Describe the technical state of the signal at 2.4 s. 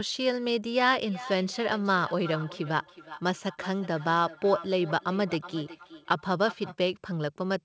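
At 2.4 s, within the feedback echo between two devices from 1.08 to 6.77 s, one device's loudspeaker reaches the other's microphone, so speech returns roughly every 0.4 s, thin and ringing, about 14 dB down.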